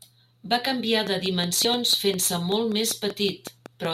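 A steady ticking runs over the speech from 1.07 s to 3.86 s: a train of clicks, roughly fifteen alike pops at a regular 5.3 per second, peaking a few dB above the speech. A likely cause is periodic interference from nearby equipment or a struggling interface.

At 1.65 s, among those ticks, a brief blip breaks through, the mark of damaged data in a compressed stream. Corrupted bytes made the decoder misread the frame there, lose sync and skip ahead to the next valid header.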